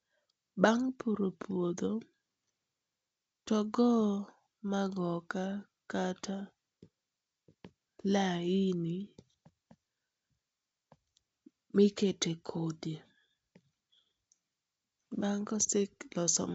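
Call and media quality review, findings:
No findings for this call and media quality review; the G.722 wideband path at 64 kbit/s is working as intended.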